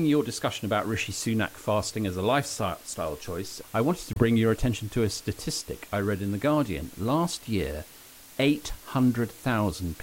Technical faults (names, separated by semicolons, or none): low bit depth with dither; Bluetooth dropout